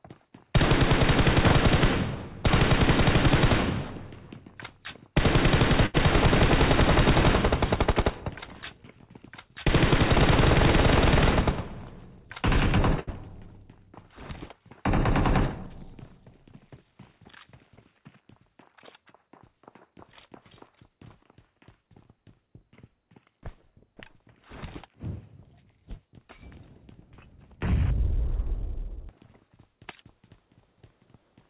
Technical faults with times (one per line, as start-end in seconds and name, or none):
5.86-5.96 short stall from a late packet
13.00-13.09 short stall from a late packet
15.76-16.78 jitter buffer speed-up
21.36-21.88 jitter buffer speed-up